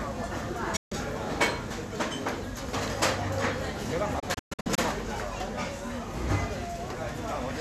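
At 0.76 s there's a digital broadcast dropout: the receiver stopped getting usable frames and muted, ducking out in a quick 8 ms fade, and the sound comes back at 0.92 s with about 144 ms simply gone, which fits roughly six lost frames. A second dropout starts at 4.19 s and is choppier, with several short holes spread over about 0.58 s until 4.79 s. The longest gap is 120 ms, and around 288 ms of audio is missing in total.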